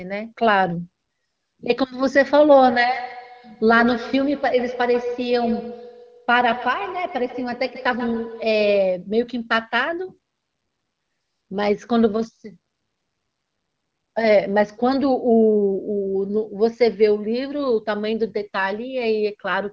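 Feedback echo between two devices runs through this speech clip from 2.57 to 9.12 s. Each stretch of speech comes back roughly every 150 ms, peaking at about 11 dB below the direct speech. Two devices on the same call share the room, so one plays what the other's microphone sent, that microphone picks it up again, and neither echo canceller can remove sound coming from the other device's speaker.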